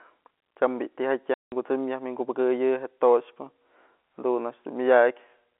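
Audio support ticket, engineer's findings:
Packet loss filled with silence, 1.34–1.52 s: 180 ms hole in the speech, hard edges. Fits nine lost 20 ms packets; the receiver played silence in their place.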